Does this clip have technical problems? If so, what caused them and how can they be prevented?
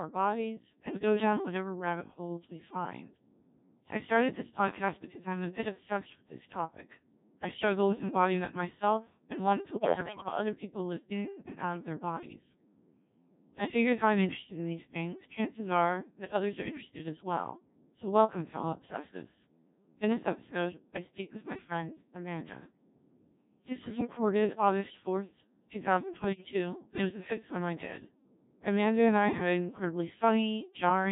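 Yes. Throughout, the speech passed through the Codec 2 vocoder, which transmits only pitch, voicing, energy and a spectral envelope and rebuilds the voice from sine waves. The result is heavily robotic and buzzy, which fits the 1.3 kbit/s mode. Running the link at a higher-rate mode or a conventional waveform codec would prevent this.

Bit errors on digital voice radio corrupted the frame parameters at 9.76 to 10.28 s (after "and wanted to", before "other people live in"), 23.80 to 24.07 s, and 26.24 to 26.53 s (before "and it was the"). The voice lurches in pitch and level and breaks into warbling gibberish, worst in the first burst. Stronger signal margin or added forward error correction would prevent this.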